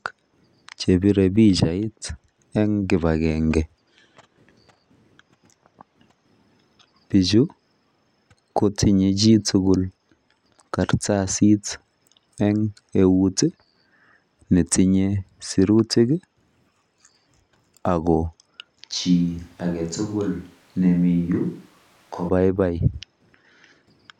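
From 18.93 s to 22.28 s the close microphone's feed likely dropped out, leaving a distant microphone to carry the speech. The voice turns abruptly roomy and hollow, thinner in the bass, about 5 dB quieter, with more background noise, then snaps back close.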